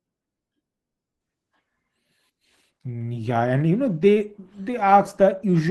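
At 1.21 s the adaptive stream drops to a lower bitrate, fitting 64 to 16 kbit/s: codec artefacts rise, and the quality changes abruptly, gaplessly.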